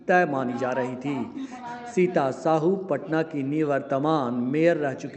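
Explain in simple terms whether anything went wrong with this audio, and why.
Nothing went wrong: the audio simply travelled over an ordinary internet call connection, which keeps the sound only up to about 8 kHz and leaves the normal texture of call compression, and nothing beyond that happened to it.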